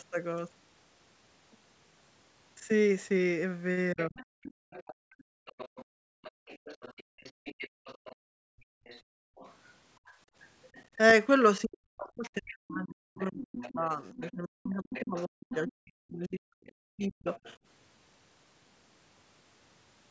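From 3.93 to 4.18 s the talker dips sharply, by roughly 30 dB. This is speech suppressed in double talk. The likely cause is the echo canceller hearing both sides at once and turning everything down.

From 4.0 to 10.85 s a second voice sits underneath, about 20 dB below the talker. This is the other side's voice leaking through, likely loudspeaker echo the canceller left behind.

From 4.53 to 10.29 s the room sound drops out in stretches, by up to about 34 dB, for around three seconds in all. This is background gated by the echo canceller, which clamped the microphone while the loudspeaker played.

From 11.64 to 17.28 s the talker is pushed down again, by up to roughly 40 dB, for about four seconds in total. This is again speech suppressed in double talk, likely from the two sides overlapping.

The other side's voice leaking through returns twice. From 12.48 to 15.72 s it is about 15 dB down. 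From 16.66 to 17.56 s it is fainter, about 25 dB down. Both are likely uncancelled echo.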